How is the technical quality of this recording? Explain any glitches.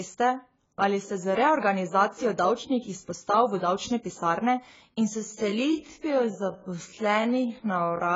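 The speech is heavily degraded by compression throughout, and its final section plays back slowed.

Across the whole clip, nothing survives above 7.6 kHz, and the damage is heavy. This is likely AAC compression at a low bitrate, consistent with about 16 kbps, which discards high-frequency detail.

From 5.16 s to the end, the pace drops abruptly to about half speed while the pitch stays put. This is likely a time-stretched section, lengthened by repeating short pieces, so the speech drags.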